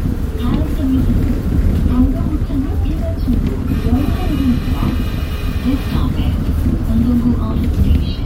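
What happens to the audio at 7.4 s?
Nothing goes wrong at 7.4 s; the sound carries on intact through that moment, with no dropout, click or distortion to be heard.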